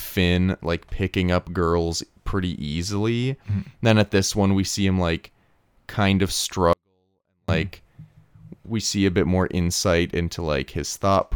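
From 6.73 to 7.49 s, just after "him like kind of", a 24-bit alignment error occurs: 24-bit samples sitting in the low bytes of 32-bit words are read as full 32-bit values. The speech stays clean but drops about 48 dB at once, becoming nearly inaudible.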